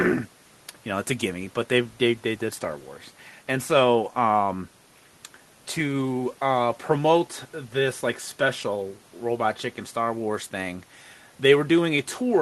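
No technical faults can be heard in the speech, which carries the ordinary coding noise of a call codec and a top end that stops at 12 kHz, consistent with Opus at around 24 kbps over a normally working WebRTC call path.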